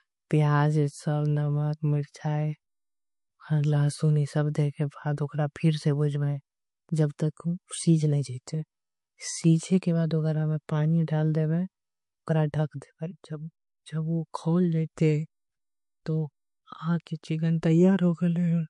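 Throughout, the speech likely went through MP3 compression at a bitrate fitting roughly 48 kbps; starved of bits, it sounds plainly watery and swirly.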